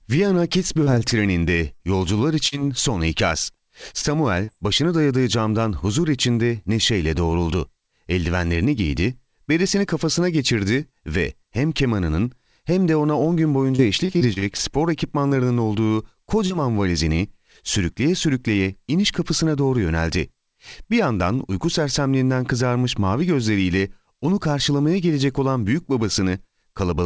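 Scattered short gaps run from 0.35 to 2.55 s. Around seven small holes open up across this stretch, the longest roughly 50 ms, with 60 ms of audio missing in all. The receiver bridges each one by extending the sound just before it, so the speech stays intelligible but picks up brief ticks, smears and hiccups. The patching covers something like 150 ms, a small share of the span.

Short concealed packet loss follows at 4.45 to 4.51 s. About 30 ms of speech arrived too late for the decoder, and 29 ms of substitute audio was generated in its place. Voiced sound is carried forward at its pitch, while unvoiced sound becomes shaped noise, and then the real signal fades back in. The result is a quick smear or tick, and a short consonant in that spot can disappear.

A jitter buffer speed-up occurs from 6.43 to 7.69 s, at 103% speed, and again from 19.50 to 20.19 s, at 110%. Too much audio had piled up in the buffer, so the receiver trimmed many small pitch-period slices to bring the delay down. 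About 50 ms is removed the first time and roughly 70 ms the second. The pitch stays put, and the second, faster stretch sounds hurried.

Repeated packet loss with a robotic sound covers 13.76 to 17.21 s. Ten gaps arrive close together, the longest 31 ms, with 180 ms missing and 262 ms of concealment filling about 8% of the span. Each patch is followed almost immediately by another, so the speech turns choppy, with fragments dropping out. Throughout, the call codec's band limit holds everything below 8 kHz, which fits G.722 running at 64 kbps.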